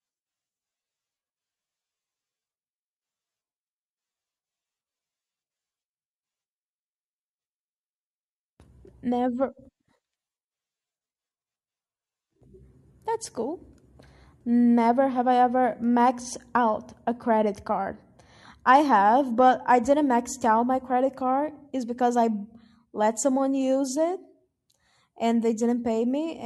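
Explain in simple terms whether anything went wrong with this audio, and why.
Overlap between stream segments at 12.42 s and 14.41 s: the speech arrives in 2-second chunks, and neighbouring chunks were time-stamped as sharing a moment. The player cut that shared bit, throwing away a sliver of real sound, so each spot clicks or skips slightly.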